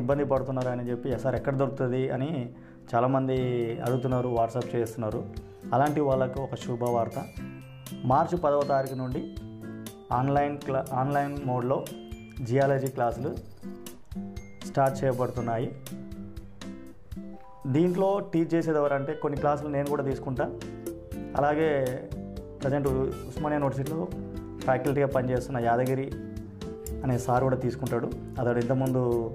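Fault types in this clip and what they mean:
No dropouts, distortion, added noise or timing irregularities can be heard anywhere in the signal, so it stays technically intact throughout.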